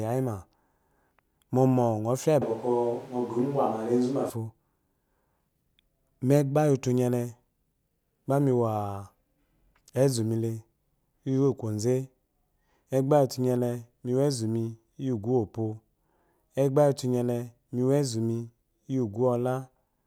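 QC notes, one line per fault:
2.42–4.30 s, switch to a distant microphone: just after "mɔmɔ ngɔ fya lyi" the speech suddenly turns roomy, hollow and thin in the bass, with room noise roughly 25 dB below it, then snaps back. Level barely changes. The close microphone likely dropped out, leaving a farther pickup.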